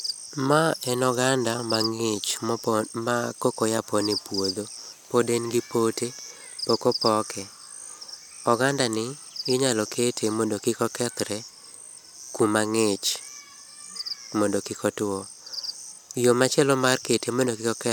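A spoken recording, and there's nothing technically wrong to point to anywhere in it.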